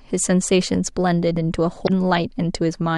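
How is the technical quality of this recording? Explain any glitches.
One glitch stands out in the speech: a short glitch from about 1.84 to 1.90 s, lasting roughly 56 ms, where the speech is briefly disrupted before clearing. This is damaged data in a compressed stream. A stretch of the encoded bytes was corrupted or lost, so the decoder misread those frames, lost its place in the stream and had to hunt for the next valid frame header before playback could continue cleanly.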